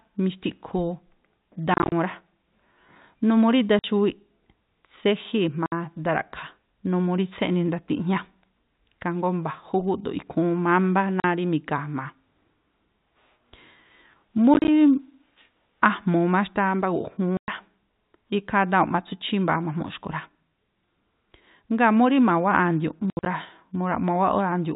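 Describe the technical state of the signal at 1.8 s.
At 1.8 s there is packet loss filled with silence, spanning 1.74 to 1.92 s: about 120 ms dropped across 180 ms in gaps up to 30 ms, consistent with 10 ms packets. The speech sounds chopped. The waveform shows flat silent stretches, and the spectrogram shows blank vertical strips within the telephone band below 4 kHz.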